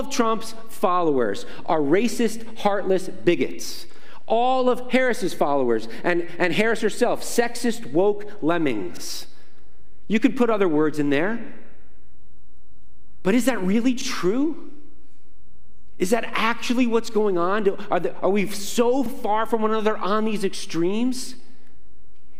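At 3.93–3.97 s, 8.97–9.02 s, 14.02–14.06 s and 19.06–19.10 s, overlapping chunks produce a brief stutter about every 5 s. Each new 5 s block begins about 44 ms before the previous block ended, so that slice of sound plays twice at the join. On the waveform, a short segment visibly repeats with a discontinuity at the seam. On a spectrogram, a thin vertical break appears where the duplicated slice restarts.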